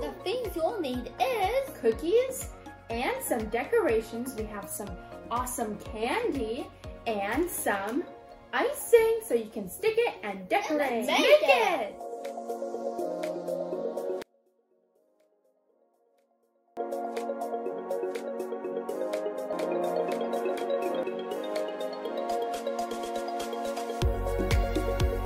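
From 14.22 to 16.77 s, one stereo channel has likely had its polarity reversed, a one channel inverted fault. When the two channels are then summed to mono, everything they share cancels, and the level drops by about 35 dB. Centred material and low end all but disappear, leaving only the faint residue of whatever differed between left and right. The full sound returns abruptly at 16.77 s.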